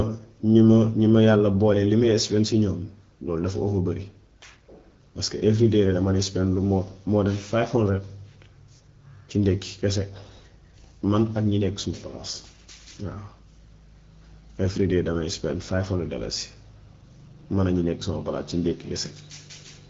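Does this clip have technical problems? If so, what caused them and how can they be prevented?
No, no technical faults here.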